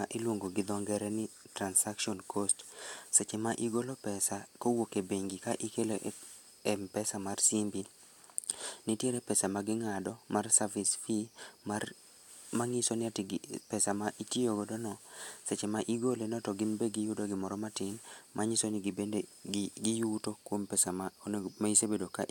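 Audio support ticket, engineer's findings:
No fault found in the speech recording. No audible defect to escalate; ticket can close.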